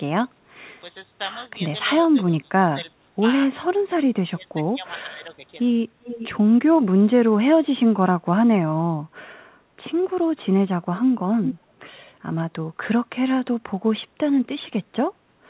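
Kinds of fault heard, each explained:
speech suppressed in double talk: the sound dips by up to about 20 dB, likely an echo canceller turning this side's voice down along with the echo.
echo leak: a delayed copy trails 381 ms behind, about 15 dB down, then louder near 11.5 s, likely loudspeaker pickup the canceller missed.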